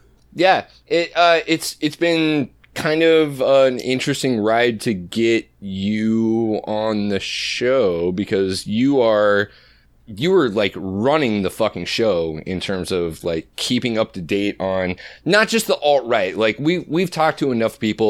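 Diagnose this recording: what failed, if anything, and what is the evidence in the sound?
Nothing failed in this recording, and there is no evidence in the sound of any fault.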